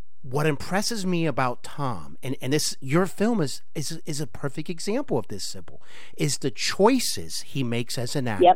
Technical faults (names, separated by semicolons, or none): DC offset